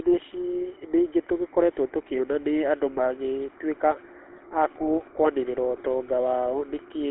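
From start to finish the speech has passed through a GSM full-rate codec, the original mobile-phone coder, at a rate consistent with its 13 kbps mode. It models the vocal tract as a filter and excites it with a sparse, regularly spaced pulse train built from only a fraction of the true excitation. The result is a plainly audible buzzy, gravelly roughness. The line band of roughly 200 Hz to 3.4 kHz strips away low body and upper brightness.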